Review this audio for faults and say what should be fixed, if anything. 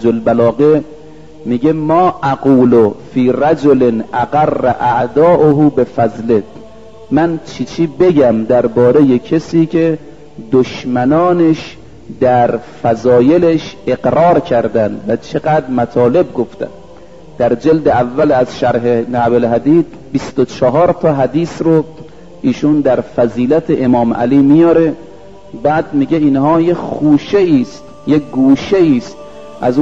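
Nothing here needs fixing, as no faults turn up anywhere in the recording.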